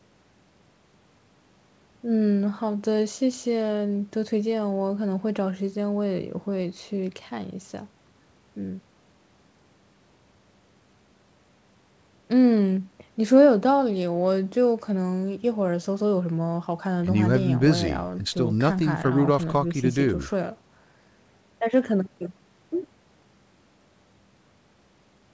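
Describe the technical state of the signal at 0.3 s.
At 0.3 s the signal is intact, with nothing above about 8 kHz, which fits the normal band limit of a G.722 call path rather than any fault.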